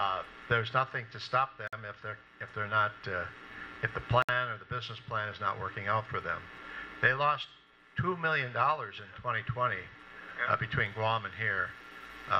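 Two short dropouts break up otherwise continuous sound: one from 1.67 to 1.73 s, about 52 ms, and another from 4.22 to 4.29 s, about 63 ms. Both have smeared edges, and the sound picks up right where it stopped. That's a gap at a join of encoded pieces: separately encoded chunks were butted together without trimming the encoder's start delay and end padding. Then from 10.86 s to the end the top suddenly gets thin and hissy, with the treble up about 10 dB at 10 kHz relative to 1 kHz. That's pre-emphasis left on, following an FM-style 50 µs curve whose matching de-emphasis cut was never applied.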